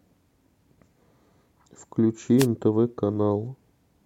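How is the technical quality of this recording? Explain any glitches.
One glitch stands out in the speech: a brief burst of static from about 2.38 to 2.47 s, lasting roughly 90 ms. It is a wireless microphone noise hit. The analogue FM radio link faded as reflected signals cancelled, so receiver noise surged up in a brief swish of hiss.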